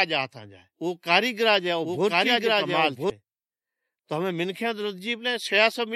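From the start until 3.1 s the speech carries a doubled audio track: a second, equally loud copy trails about a second behind, likely a slower capture path mixed in. It sounds dry and overlapping, then cuts off abruptly. On a spectrogram, identical full-band patterns repeat one second apart.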